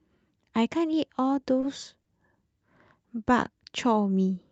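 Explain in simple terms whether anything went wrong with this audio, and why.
Two short stalls from a late packet occur, at 1.61 to 1.65 s and 2.03 to 2.08 s. Each time, a piece of call audio arrived late. The player held the last sound for about 20 ms, then 30 ms, and resumed. Nothing is lost.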